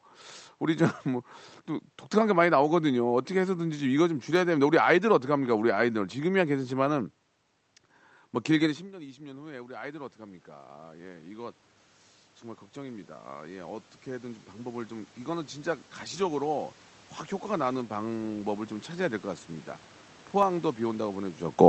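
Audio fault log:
4.36 s, 5.90 s and 20.43 s: dropped samples. Each is a single sharp click with no sound missing. The likely cause is a tiny fraction of a millisecond of samples vanishing, so the waveform jumps abruptly to a later value.
8.92–11.62 s, 12.41–16.70 s and 17.46–18.74 s: automatic gain rising. After the talker moves back near 8.5 s, the level at the microphone falls by about 19 dB. The gain control then raises its gain by about 6, 7 and 3 dB, so the voice and room noise swell together.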